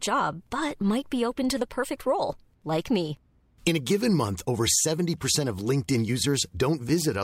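No technical faults can be heard anywhere in the speech; the signal holds steady throughout, with nothing that points to trouble in recording, processing or transmission.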